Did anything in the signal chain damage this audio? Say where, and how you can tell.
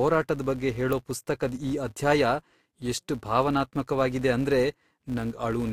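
Yes. In block processing, a filter restarted on every block, so each opens with a transient. The result is a 172 Hz buzz throughout that follows the speech level, which fits 256-sample blocks.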